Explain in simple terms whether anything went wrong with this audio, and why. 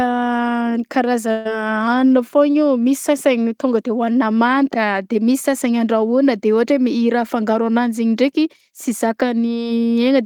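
At 1.31 seconds, a burst of packet loss cuts into the speech until 1.47 seconds. About 140 ms of sound never arrived. The receiver stretched the last sound to cover the gap, so it holds and fades. Then the speech resumes, with that piece missing.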